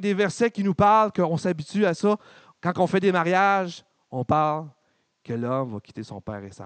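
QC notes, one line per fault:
Nothing to flag on this speech clip; the only extra is a faint room noise, about 51 dB below the talking, which is just the space the mic was in.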